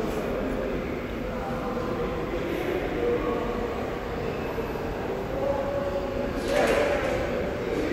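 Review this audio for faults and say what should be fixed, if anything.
No faults detected in this audio; nothing needs fixing.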